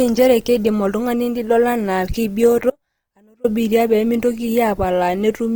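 From the start the whole speech clip carries a grainy, rough texture, which sounds like Opus compression, likely in its music mode at a low rate that fits about 24 kbps. The band stays wide, up to about 20.2 kHz, but the encoder fills starved bands with noise, so the damage is plainly audible.

At 2.70 s the sound drops out abruptly and returns at 3.44 s, a 740 ms hole. This is an audio dropout to a faint residue: the signal was likely lost upstream while the path stayed live, leaving only a weak trace roughly 35 dB down.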